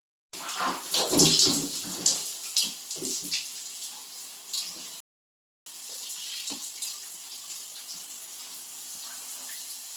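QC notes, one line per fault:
throughout, Opus compression: Tonal parts of the sound come out rough, grainy and noisy rather than clean. Bright detail is still present across the full range, but it is smeared and hashy instead of simply missing, so there is little of the swirling, hollow quality of MP3. This points to Opus in its music (CELT) mode, which keeps each band's energy but refills starved bands with folded or noise content. The damage is plainly audible, which fits a low rate of around 16 kbps.
5.00–5.66 s, playback stall: The sound cuts out abruptly in mid-flow and goes silent for about 0.66 s, then carries on. A dropout this long is most likely the player running dry of data or having its audio thread held up. Nothing reaches the output until it recovers.
5.66–8.28 s, time-compressed catch-up: Right after the gap, the audio runs hurried, at about 1.25 times normal speed, for roughly 2.6 s. 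The pitch stays where it should be. The player is working off the backlog left by the stall. It drops small slices of audio and cross-fades across the joins, which tightens the timing without shifting pitch.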